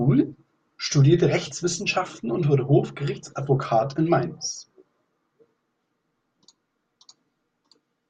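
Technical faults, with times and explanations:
No technical faults can be heard in the speech at any point; the signal stays continuous and stable throughout.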